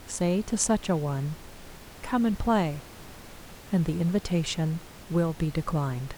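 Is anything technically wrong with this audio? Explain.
No, nothing is technically wrong with this audio.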